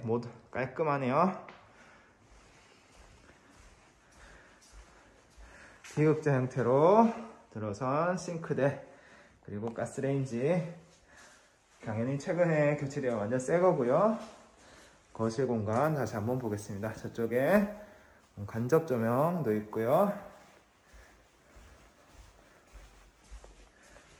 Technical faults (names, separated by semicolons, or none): crude rate conversion